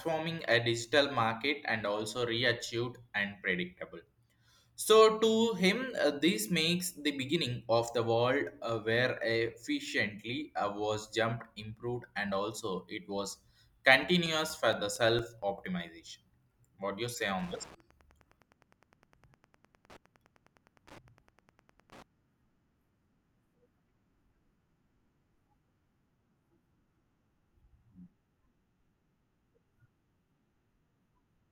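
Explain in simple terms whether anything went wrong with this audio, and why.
Two things go wrong in this speech clip. From 14.03 to 15.89 s you get CD scratch ticks: nine short clicks, the longest only a few milliseconds, about five a second. That's a blemish on the disc hitting once per turn, wiping out more data than the player can repair, so it patches or mutes the gap.

Then from 17.27 to 22.03 s there's Wi-Fi interference: a faint, steady ticking about ten times a second. That timing matches a Wi-Fi radio's beacon every 102.4 ms, picked up and rectified by the audio circuit sitting too close to it.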